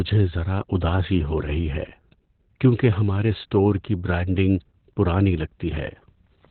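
Throughout the speech, Opus voice compression is heavy. The SILK coder has fallen back to narrowband, so a spectrogram shows a flat ceiling with nothing above 4.2 kHz. Coarse excitation coding leaves the voice muffled, hoarse and slightly robotic, which fits roughly 8 kbps.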